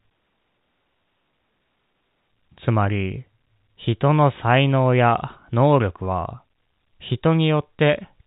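Nothing stood out on listening to this speech recording, which carries the narrow band of G.711 telephone coding with nothing above 4 kHz.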